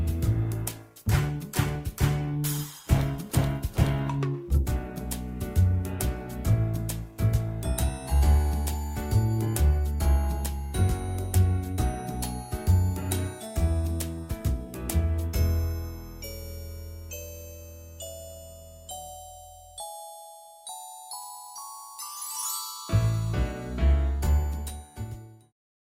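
From 0 to 4.0 s the treble is dull and codec smearing is heavier. Then the quality jumps abruptly with no gap. That is an adaptive stream starting at a low bitrate, which sounds like Opus at around 32 kbit/s stepping up to around 64. A band-limited recording would stay dull throughout, but here the improvement is sudden and lasting.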